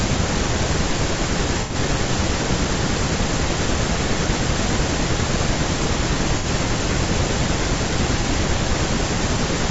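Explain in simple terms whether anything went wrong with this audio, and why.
Throughout, the speech sounds rough and grainy, likely from low-delay AAC compression, which codes sound in very short chunks and loses fine detail.

AAC frame loss with concealment causes brief smeared, noisy patches at 1.61–1.75, 6.38–6.46 and 8.21–8.25 seconds. There, the player filled in missing chunks of audio by guessing from the sound just before.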